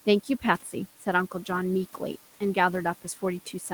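From 0.62 to 0.74 s, speech is cut by the noise suppressor: it mistakes part of the speech for background and pulls it down by about 10 dB for roughly a tenth of a second, so the sound turns faint and swallowed. A waveform shows a brief dip in envelope, and a spectrogram shows the energy thinning across frequencies there, with room noise faintly present beneath.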